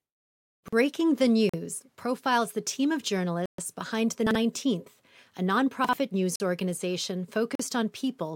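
Speech with two kinds of timing fault. Chunks out of order occur at 0.64, 4.27 and 5.85 s. Each time a 43 ms chunk plays one chunk late, swapped with its neighbour, so nothing is lost but the syllables jumble briefly. The waveform shows abrupt discontinuities at the joins. Blocks of digital silence fall at 1.49 s, just before "profiles the team of", at 3.46 s, just after "profiles the team of", and at 6.36 s and 7.55 s, the last just after "news organization". Three last 43 ms, which fits an unfilled 2048-sample output buffer, and the one at 3.46 s lasts 128 ms. Each shows as a flat, silent stretch.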